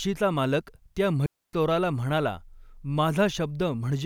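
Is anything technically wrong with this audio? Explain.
Yes. From 1.26 to 1.53 s, between "मालक त्या" and "चोराला म्हणाला", a digital wireless dropout: the receiver lost data and muted for 272 ms, leaving a clean near-silent gap without noise bursts.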